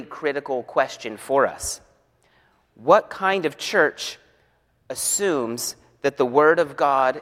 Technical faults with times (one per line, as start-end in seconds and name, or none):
none